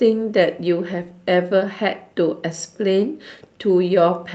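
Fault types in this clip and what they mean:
Nothing in this speech recording stood out as a technical problem on listening.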